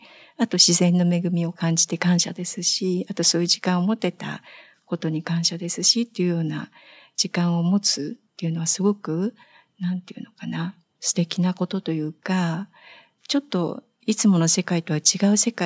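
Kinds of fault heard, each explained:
Nothing to flag here: the speech has just been through ordinary call microphone processing, which trims off the deepest bass and leaves nothing above 8 kHz, and none of that counts as a fault.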